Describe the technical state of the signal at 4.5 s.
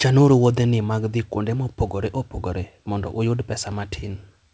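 At 4.5 s the speech signal is intact, with no dropout, glitch or distortion, only the ordinary call-codec character of a band that stops at 8 kHz.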